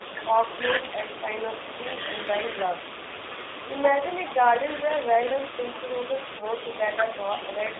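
Speech runs through a G.729 codec throughout, confined to about 300 Hz to 3.7 kHz. It sounds plainly rough and synthetic, consistent with 8 kbit/s VoIP coding.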